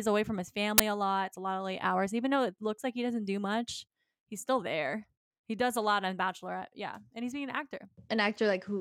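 At 0.78 s, between "away from his" and "a lot", an uninitialised buffer cuts into the speech for 20 ms. A block of audio went out to playback before any samples had been written into it, so whatever data already sat in that memory was played as sound, which fits a 20 ms buffer. It is heard as a sudden, harsh burst of digital noise. On a waveform it appears as a dense slab; on a spectrogram, a bright vertical band across all frequencies.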